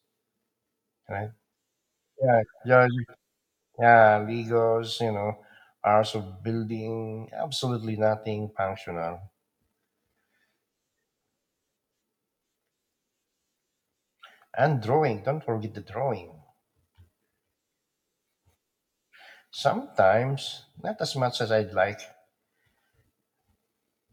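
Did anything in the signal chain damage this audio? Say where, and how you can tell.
No, nothing audible in this speech points to damage at any stage of the signal chain.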